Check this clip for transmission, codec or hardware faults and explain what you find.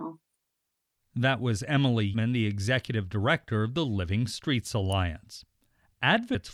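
Three faults are audible: two places where compressed frames are skipped, and one electrical switching spike.

Compressed frames skipped, at 2.13 s and 6.34 s. At 2.13 s the audio lurches forward just before "the executive director of". About a fifth of a second is missing, which fits roughly ten frames of around 26 ms. At 6.34 s a similar jump drops about a fifth of a second again, which points to around seven frames. Whole frames were lost in the file or discarded by the decoder as damaged.

Electrical switching spike, at 4.92 s. A sharp snap or tight cluster of clicks sits on top of the speech without interrupting it. This is likely a nearby switch, motor or static discharge arcing briefly, with the audio line picking up the burst. Its sudden, very short attack sets it apart from the jumps at the two skips.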